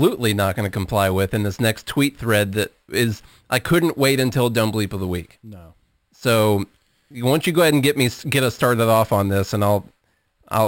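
A speech clip with a bright metallic fizz throughout that follows its level. The fizz sits between 6 and 12 kHz, about 17 dB below the signal. This is imaging from sample-and-hold upsampling: each sample was repeated without smoothing, which fits a 12 kHz source raised to 44.1 kHz.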